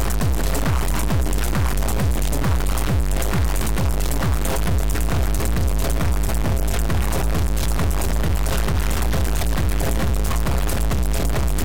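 From start to finish the sound carries a harsh, buzzy distortion, and even the quiet gaps are filled with loud noise. The likely cause is a stuck bit, where one high data bit, worth about -15 dBFS, is held fixed and knocks many sample values off by that amount.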